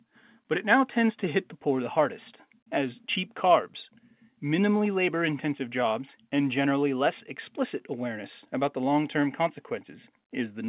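The speech contains no technical faults. Its narrow band, with nothing above 4 kHz, comes from mu-law G.711 telephone coding working normally.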